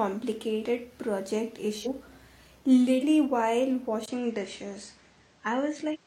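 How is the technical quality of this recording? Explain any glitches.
The recording has two kinds of fault: four jumps where chunks of audio go missing, and a change in tone and background partway through that lasts to the end.

Compressed frames skipped, at 0.61, 1.81, 2.98 and 5.90 s. At each point the speech leaps forward: roughly 50 ms at the first, about 200 ms at the second, and about 300 ms at the last two. These lengths fit whole frames of about 46 ms going missing or being rejected as damaged by the decoder.

Input switched to a poorer device, at 4.06 s until the end. After a short gap of about 20 ms the sound turns duller and boxier. Nothing above 9 kHz comes through, and a new background noise sits about 30 dB below the speech, while loudness stays the same. The likely cause is the system moving to a different microphone or a headset call profile. Unlike a gradual filter or gain drift, the tone, bandwidth and noise all change at once at a single moment and stay that way.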